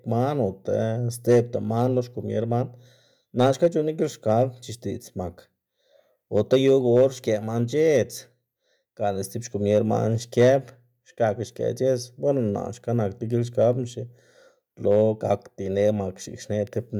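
Hard clipping runs through the whole of the speech, from start to finish. The signal reaches some stage driven about 5 dB beyond what it can pass, so the highest peaks are sheared flat. Only a small fraction of samples, well under one percent, actually hit the ceiling, so the damage is confined to the loudest moments. There, the squared-off tops add high harmonics, heard as brief crackle and grit on peaks.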